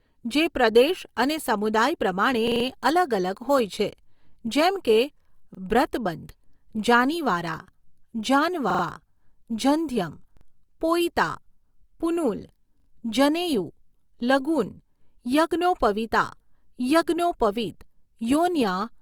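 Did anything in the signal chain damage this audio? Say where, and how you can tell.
Yes: repeated buffer at the driver or buffer stage, at 2.48, 5.55, 8.70, 10.37 and 12.80 s. Each time, the same 43 ms piece stutters with hard joins, which fits a 2048-sample buffer replaying. Unlike a dropout, nothing falls silent.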